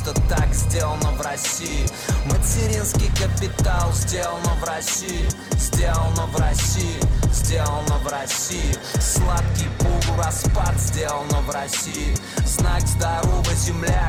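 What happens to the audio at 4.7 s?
Nothing goes wrong at 4.7 s; the audio runs through that moment without any dropout, glitch or other fault.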